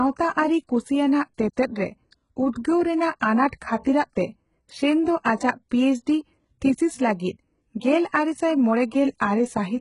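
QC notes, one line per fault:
Throughout: HE-AAC compression. The speech has a hard ceiling at 11.1 kHz, and the treble below that is not the original. It has been rebuilt by copying lower bands upward under a coarse envelope. Harmonics above the crossover fail to line up, so s sounds come out gritty, metallic and lispy. The damage is heavy, which fits a very low bitrate around 12 kbps, likely from HE-AAC v2.
3.20 s and 3.48–3.53 s: pre-echo. Each attack is preceded by a short hiss, spreading about 13 ms ahead of the first and about 46 ms ahead of the second. The codec spreads quantisation noise sized for the loud onset across its whole transform block, so the quiet moment before each attack fills with noise. The longer spread at 3.48 s makes that attack sound softened and smeared.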